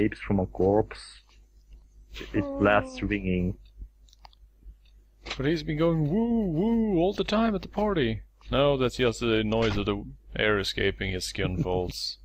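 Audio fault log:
No fault to log for this audio.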